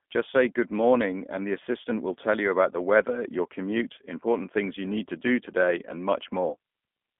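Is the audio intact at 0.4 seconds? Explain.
No. G.729 codec damage runs through the whole clip, including 0.4 s. The sound is rebuilt from a vocal tract filter, a pitch predictor and a few pulses per frame, which fits an 8 kbit/s coder. The band sits between 200 Hz and 3.5 kHz, and the speech comes out plainly rough and synthetic.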